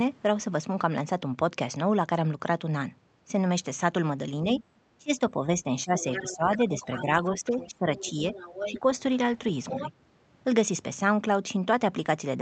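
From 4.98 to 8.23 s the speech is suppressed in double talk: for about two seconds in total the level dips by up to roughly 15 dB, most likely because the echo canceller treated overlapping talk as echo. A brief repeat at 8.69 to 8.85 s drops about 10 dB. On the waveform these show as sunken, uneven stretches.

From 5.97 to 8.79 s, and again at 9.65 to 9.91 s, the other side's voice leaks through, about 10 dB below the main speech, likely residual loudspeaker echo the canceller failed to remove. The spectrogram shows a faint second set of harmonics, still within the call path's 8 kHz band limit.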